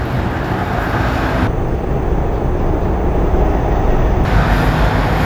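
From 1.47 s to 4.25 s the audio drags at half speed and drops a full octave, with a faint mirrored copy in the upper spectrum. This is stereo read as mono: interleaved left and right samples were played back sequentially as one channel.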